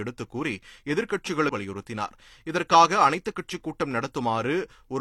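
A speech recording with damaged data in its compressed stream: from 1.47 to 1.51 s, corrupted bytes leave the decoder misreading frames and losing sync until it finds a valid frame header, so a brief garbled blip of roughly 30 ms breaks into the sound.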